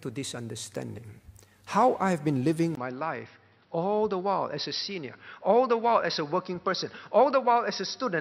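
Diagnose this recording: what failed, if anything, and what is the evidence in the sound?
At the driver and device level, the input was likely switched to a poorer device at 2.75 s. After a 20 ms gap, the speech loses everything above 5.7 kHz, turns duller and somewhat quieter, and carries a new, faint background noise through to the end.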